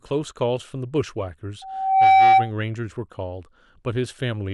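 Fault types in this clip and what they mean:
Loudspeaker feedback squeal: the microphone re-captures its own loudspeaker output and the loop gain tops unity at 768 Hz, so that tone grows on itself. It swells over about half a second from 1.62 s, sits roughly 15 dB above the speech, and stops at 2.51 s.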